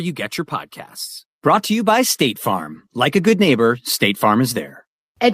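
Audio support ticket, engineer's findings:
Listened through the speech clip and nothing on the audio path stood out, so there's nothing to chase on this one.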